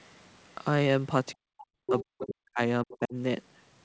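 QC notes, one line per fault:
1.34–2.59 s and 2.84–3.15 s, speech suppressed in double talk: the talker dips by up to roughly 40 dB, then 30 dB, while the other side speaks. The likely cause is an echo canceller turning both down. Unlike packet loss, nothing is held or skipped.
1.68–1.75 s, burst of packet loss: about 54 ms of the last sound is stretched as a fading buzz or hiss, then 60 ms of audio is missing when playback resumes.
1.86–2.01 s, 2.21–2.26 s and 2.91–2.98 s, other side's voice leaking through: a second voice appears, roughly 5, 15 and 25 dB under the speech. This is likely loudspeaker echo the canceller missed. It adds a voice rather than removing the talker.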